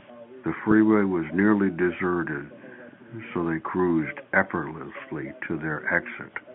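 Nothing goes wrong anywhere in this bit of speech, which just has the usual narrow, telephone-band sound of an ordinary G.711 A-law line doing its normal job.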